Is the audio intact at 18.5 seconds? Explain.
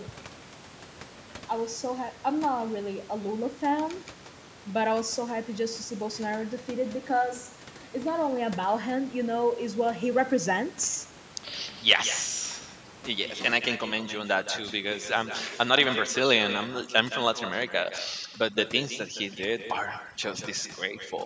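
No. Two things are going on at 18.5 seconds. First, there's echo with no canceller, and it runs through the whole clip. The far end is playing the call out of a loudspeaker, their mic picks it back up, and nothing strips it out. So every bit of speech gets a second, thinner copy trailing it by something like 0.15 seconds, sitting about 11 dB under the direct sound.

On top of that, 18.5 s falls inside a stretch of overdone noise removal that starts at 13.58 s and lasts to the end of the clip. The noise reducer is pushed too hard, so it clamps individual frequency bands down whenever they look like its noise estimate. The room noise, which sat about 19 dB under the speech, gets gouged into near-silence with little twinkling specks, and the quieter parts of the speech get eaten along with it.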